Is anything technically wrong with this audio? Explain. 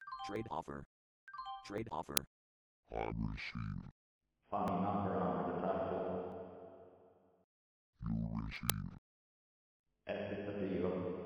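Yes. Jumps in the sound at 0.36, 1.78, 4.68, 6.32 and 8.56 s, likely a dropped buffer (overrun) where unread audio was overwritten, skipping roughly 20 ms early and roughly 70 ms in the last two. Uninitialised buffer at 2.17 and 8.70 s: 2.9 ms loud cracks from leftover memory played as samples, which fits a 128-sample block.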